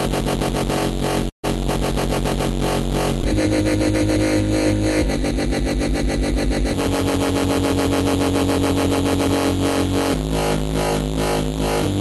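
From 1.29 to 1.45 s there is a burst of packet loss. About 140 ms of audio never arrived. The receiver stretched the last sound forward, then faded it, leaving near-silence for about 110 ms before playback resumed further on. That fade into a gap and the skipped stretch set it apart from a brief concealment.

At 3.21 to 3.25 s a short concealed packet loss follows. About 20 ms went missing, and the receiver patched the hole by continuing the preceding sound and blending back in. It adds a couple of milliseconds and leaves only a quick smear or wobble. The whole clip also carries the band limit of a call codec, which fits Opus topping out around 12 kHz.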